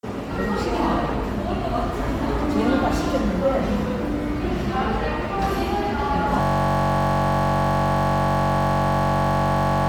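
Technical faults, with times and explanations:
Throughout: Bluetooth LC3 compression, likely. The sound has an audible grainy, breathy edge up top, which fits LC3 at around 48 kbps in 10 ms frames.
6.41 s to the end: system hang loop. A 21.33 ms slice repeats nonstop, so you hear a steady 46.9 Hz buzz, which fits a frozen 1024-sample buffer.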